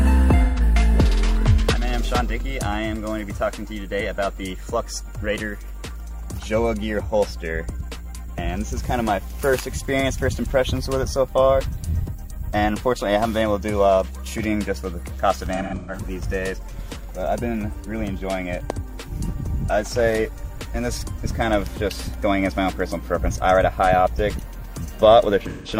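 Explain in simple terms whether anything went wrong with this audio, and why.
A few short glitches come from AAC frame loss with concealment: chunks of the compressed stream went missing and the decoder papered over them by reusing the last good sound. You hear a brief smeared, noisy patch at 0.44 to 0.60 s (about 130 ms lost), a stretch at 15.53 to 15.99 s where about 300 ms of gaps are scattered, the longest around 150 ms, and another at 25.48 to 25.72 s (about 170 ms).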